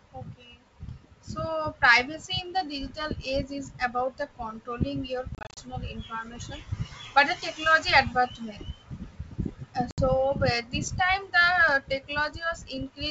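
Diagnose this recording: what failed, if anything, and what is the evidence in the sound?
Network packet loss on the ADPCM call: at 5.35 to 5.59 s, gaps totalling 150 ms, the longest 30 ms, cut the speech, and again at 9.91 to 10.04 s. On a spectrogram these are blank vertical slots with sharp waveform edges. The decoder's predictor drifts, so each return is slightly distorted before settling.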